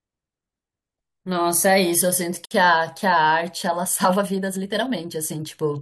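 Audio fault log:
2.45–2.51 s: gap at a join of encoded pieces. The speech drops into a gap of about 57 ms, then picks up exactly where it left off. Two separately encoded segments were butted together untrimmed, so one run's start-up delay and the other's last-frame padding both remain. On a waveform it is a flat, near-zero notch with smeared walls. A spectrogram shows a blank vertical stripe across all frequencies, its edges slightly blurred by the codec.
3.78–5.81 s: time-stretched section. From 3.78 s to the end, the speech suddenly runs about 1.46 times faster while its pitch stays put, so it sounds rushed. This is likely pitch-preserving compression that fits the audio into a shorter slot by discarding short slices of sound. On a spectrogram, harmonic lines stay level but syllables crowd closer together, with small discontinuities. The waveform shows tighter envelopes with occasional abrupt seams.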